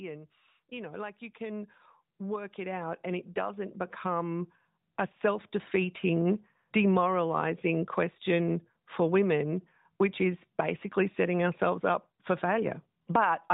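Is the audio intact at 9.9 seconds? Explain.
Yes, the audio is intact at 9.9 seconds, with only the usual narrowband mobile-codec sound, nothing above 4 kHz and a light coding texture that fits AMR-NB at its 12.2 kbps top rate.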